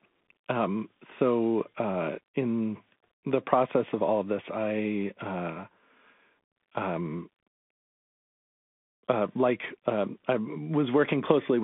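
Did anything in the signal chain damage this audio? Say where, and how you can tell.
Yes. Throughout, the speech is squeezed into a 200 Hz to 3.5 kHz band with nothing above 3.8 kHz, s sounds scratch, and granular hiss sits underneath. That is the codec stage, a Bluetooth CVSD headset codec, whose one-bit up-down steps fail to track sharp detail.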